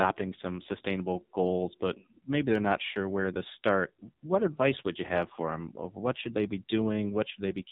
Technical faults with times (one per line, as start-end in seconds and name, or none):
0.00-7.72 AMR narrowband mobile codec